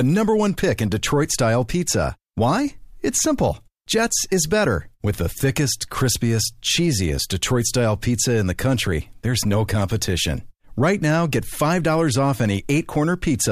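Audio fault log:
No fault can be heard anywhere in this speech recording. Nothing in the audio calls for an entry here.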